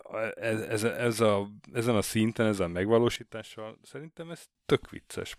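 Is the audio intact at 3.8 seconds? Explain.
No. At 3.8 seconds the clip sits inside a sudden gain jump lasting from 3.16 to 4.55 s, where the speech and its background noise drop together by about 12 dB at once. The likely cause is a digital gain change applied between adjacent samples without any ramp.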